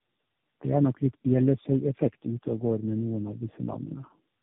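The speech passes through several low-rate speech codecs in a row (tandem speech coding), decoded and re-encoded at each link, so every coder models the previous one's already damaged output. Across the whole clip the result is rougher and more muffled than a single codec, with a warbly texture, which fits about three narrowband coders of the AMR and G.729 kind. Nothing reaches above about 3.7 kHz.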